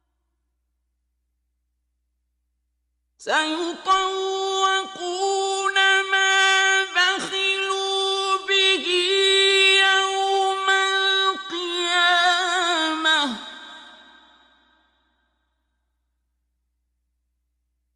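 From start to finish the sound is dull and topped off, with a gurgling, granular roughness and upper detail that flickers in and out. The likely cause is MP2 compression at a low rate, which fits roughly 80 kbps. Layer II divides the spectrum into 32 sub-bands and shares out bits among them. Short of bits, it shuts off upper bands entirely and quantises the remaining ones coarsely, and the damage is plainly audible here.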